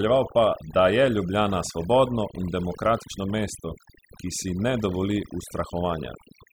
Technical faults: overdone noise removal

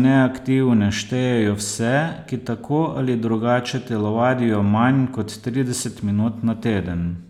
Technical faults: none

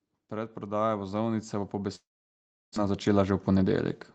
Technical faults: automatic gain rising; long network dropout; jitter buffer speed-up

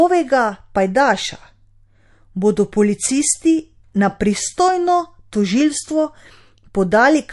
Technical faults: MP3 compression

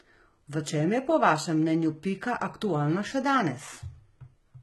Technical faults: HE-AAC compression

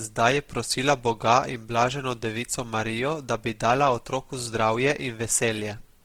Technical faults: Opus compression

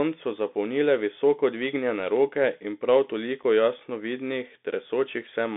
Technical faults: Bluetooth CVSD headset codec; unconcealed Bluetooth headset packet loss

